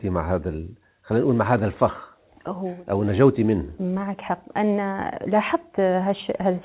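No technical faults occur at any point in this speech, which is carried in the usual mu-law G.711 telephone band.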